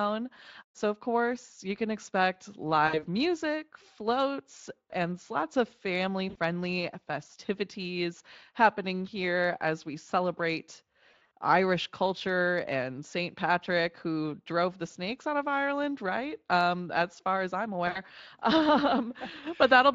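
Speech that briefly turns buzzy and smeared, the sound stretched into a fading tonal drone before recovering, at 2.87–3.06 s, 6.29–6.36 s, 11.11–11.30 s and 17.87–18.0 s. This is VoIP packet loss concealed by the speech codec. Roughly 60, 60, 120 and 80 ms of audio went missing. At 11.1 s the gaps are scattered over 200 ms in runs of up to 40 ms. The decoder repeated its last pitch and filter at falling gain, and the voice stays thin a little past each gap. The Speex coding underneath adds only light damage.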